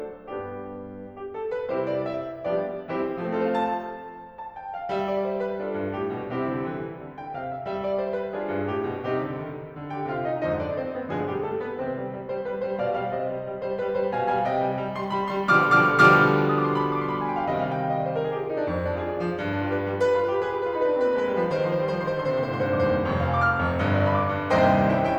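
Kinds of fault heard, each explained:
No technical fault can be heard anywhere in this music. There is nothing to list for it here.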